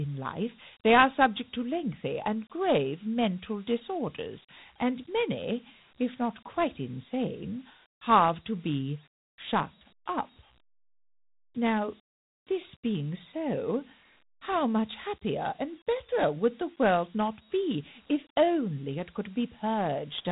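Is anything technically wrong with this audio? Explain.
Yes. Throughout, the speech carries Dialogic VOX ADPCM damage: 4-bit adaptive coding, consistent with a 32 kbps stream, leaves a gritty hiss riding on the speech. Nothing reaches above 3.8 kHz, which narrows the sound to telephone bandwidth.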